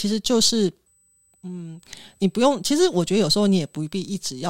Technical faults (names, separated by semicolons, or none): USB whine